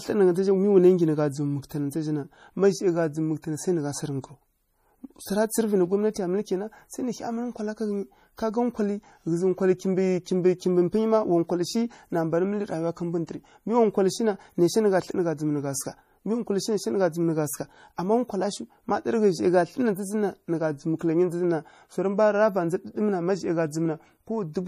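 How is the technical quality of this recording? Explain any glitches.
The technical quality is held back by audible data compression across the whole speech recording, most likely MP3 compression. Throughout all of it, nothing is present above 15.3 kHz, and the sound has a plainly watery, swirling texture, with metallic chirping on s sounds and softened consonant onsets. The encoder was short of bits, which fits a low bitrate around 40 kbps, so it cut the top at a fixed frequency and dropped weak frequency components that flicker in and out between frames. Those flickering artefacts set it apart from a simple low-pass filter, which would only dull the sound.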